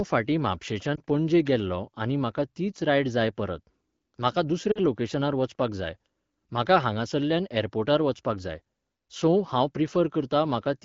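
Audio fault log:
0.95–1.02 s, lost AMR speech frame: A brief dip or warble just before "पणजे गेल्लों आनी म्हाका". The gap fits one missing 20 ms frame. The decoder fills it by repeating the last good pitch and vocal tract settings at lower gain. The speech then recovers, weak or rough for a moment.
4.71–4.79 s, lost AMR speech frames: Between "रायड जाय परत म्हाका" and "लोकेशनार वचपाक जाय म्हाका" the sound drops toward near silence. That fits about 40 ms, two frames, of repeated fading parameters. The speech returns, briefly weak or rough, to the clear 12.65 kbit/s wideband sound.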